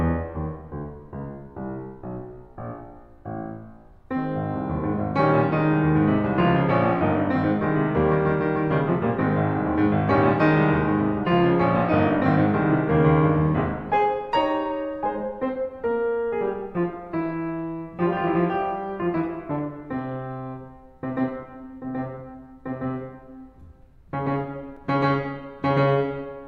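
Right near the end of the music, at 24.77 s, there's a block of digital silence, a gap of about 5 ms where the signal drops straight to silence and comes straight back with no fade at all. At this length you hear it as a quick tick rather than a hole. It's the kind of dropout you get when the output buffer isn't filled in time.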